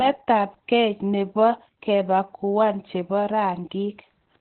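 The speech sounds muffled, hoarse and somewhat robotic from start to finish, with nothing audible above about 4.2 kHz. This is heavy Opus voice compression: the SILK coder running narrowband at a bitrate consistent with 8 kbps, cutting the band and coding the excitation coarsely in 20 ms frames.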